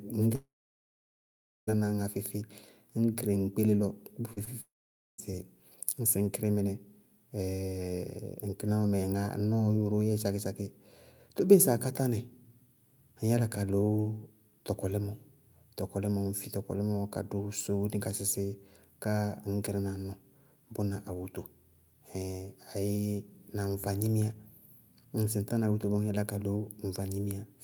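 At 0.35 s the speech breaks off. A brief fading continuation gives way to near silence until 1.69 s, about 1.2 s of it. This is likely a long network dropout. Roughly 1.3 s of speech never arrived and is simply gone.

At 4.33 s and 4.44 s there are two short concealed packet losses, about 40 ms and 20 ms long. The receiver filled each gap by extending the preceding sound. Each one is heard as a quick smear or wobble.

From 4.61 s to 5.2 s there is another gap, likely a second long network dropout. About 0.58 s of speech is missing. Most of it, around 0.5 s, is silence before the speech resumes.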